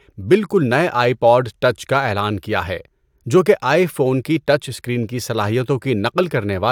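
No technical fault can be heard anywhere in the speech; the signal stays continuous and stable throughout.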